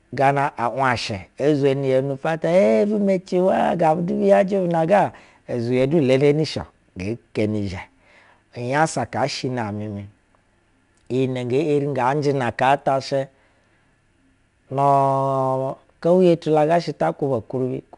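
Throughout the speech, 4-bit ADPCM compression encodes each sample as a coarse step from a predicted value, and the step size adapts too slowly. The result is an audible gritty hiss that rides on louder passages, roughened consonant onsets, and nothing above about 10.6 kHz.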